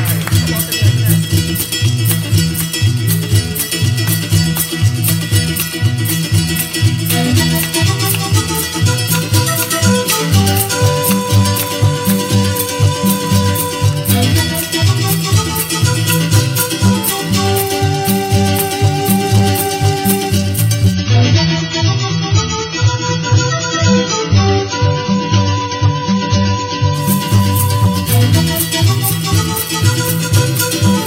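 The audio carries hard clipping from start to finish: it's pushed roughly 5 dB past what the stage can pass, so the loudest peaks, only a small fraction of the signal, get sliced flat and throw off high harmonics, heard as a gritty crackle on peaks. Then from 20.94 to 26.94 s there's an adaptive stream at a lower bitrate, where the connection dipped and playback switched to a leaner version of the same stream. The treble suddenly stops around 7 kHz and codec artefacts come up, with no gap at either switch. That fits a jump from roughly 96 down to 16 kbit/s AAC.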